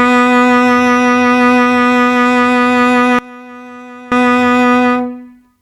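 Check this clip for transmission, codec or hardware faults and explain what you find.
One fault turns up in the music. One channel inverted, from 3.19 to 4.12 s: the level drops by about 22 dB, leaving a faint residue, likely because one channel's reversed polarity cancels shared content when summed to mono.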